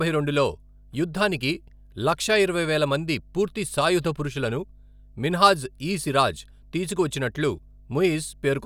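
A ground loop or a nearby power transformer is leaking the 50 Hz supply into the signal path, and it does so from start to finish of this speech recording. The result is mains hum: a constant low drone at 50 Hz, with a few low harmonics stacked above it, sitting roughly 25 dB below the speech. It never fades or shifts, so it is most obvious in the pauses between phrases.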